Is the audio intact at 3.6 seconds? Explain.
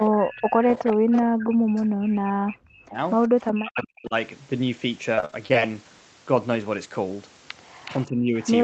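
No. From 0.1 to 4.14 s the speech is suppressed in double talk. The level dips by as much as around 40 dB and the top end thins or vanishes in pieces, for about three seconds in total. That is likely an echo canceller ducking its own talker while the far side speaks. Unlike packet-loss dropouts, the gaps follow the overlap rather than landing at random.

From 3.23 to 3.88 s there is also an echo leak. A copy of the voice returns 371 ms late, around 20 dB below the speech, likely because the canceller left some loudspeaker pickup in the signal. It is a distinct, delayed repeat, not a reverberant smear.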